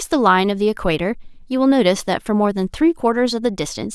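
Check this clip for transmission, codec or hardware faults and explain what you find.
Listening through the speech, nothing stood out as a problem.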